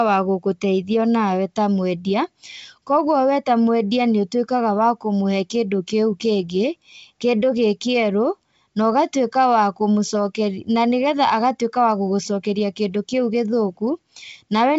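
Nothing in the speech stands out as a technical problem; it carries the usual sound of G.722 wideband telephone coding at 64 kbit/s, with the band reaching up to about 7 kHz and any trace of the coding faint at most.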